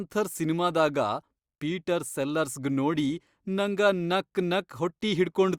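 Speech recording with no technical faults to report.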